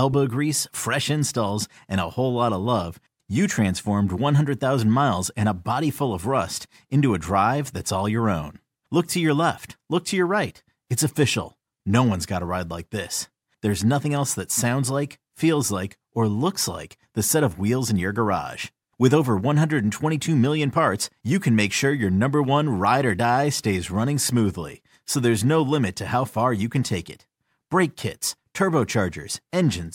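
Nothing stood out as a technical problem on listening to this speech recording.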